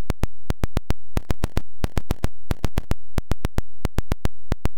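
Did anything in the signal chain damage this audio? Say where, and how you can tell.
Yes. From 1.13 to 2.84 s, harsh buzz appears and even quiet stretches fill with noise near -35 dBFS. This is likely a converter stuck bit. Clipping would leave quiet parts clean.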